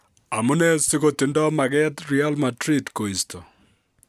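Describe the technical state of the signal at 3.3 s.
At 3.3 s the speech signal is intact, with no audible dropout, clipping, distortion or other fault at that moment.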